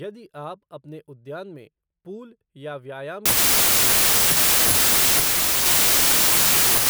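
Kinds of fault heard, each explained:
Wrong sample width: from 3.26 s to the end, the sound turns into loud, harsh noise with the speech faintly buried inside, slowed to 0.75 times speed and dropped in pitch. This fits 32-bit samples being read as packed 24-bit ones, so many values mix bytes from neighbouring samples. Unlike a byte-order swap, which keeps speed and pitch, the slowed, lowered speech shows the reader is splitting the data into the wrong number of samples.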